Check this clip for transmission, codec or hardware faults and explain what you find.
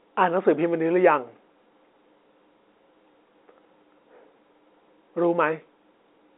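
Nothing stood out on listening to this telephone-band speech.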